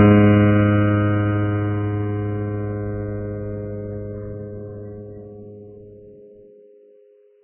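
Throughout the music, nothing survives above 3 kHz, and the remaining treble turns hissy and grainy with smeared attacks, likely from heavy Vorbis compression at a very low bitrate. A spectrogram shows a hard ceiling at 3 kHz, with noisy, blotchy texture beneath it.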